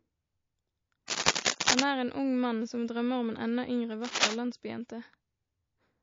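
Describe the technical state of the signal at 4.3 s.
At 4.3 s a burst of cable scratch noise runs from 4.04 to 4.35 s, just after "enda yngre", with dense, uneven rustling about as loud as the speech. It is likely a worn contact shifting, and its irregular texture sets it apart from steady hiss or isolated clicks. Throughout, the speech sounds watery and swirly with dulled treble, likely from MP3 compression at a low bitrate around 32 kbps. Unlike broadband noise, this is a warbling of detail from frame to frame.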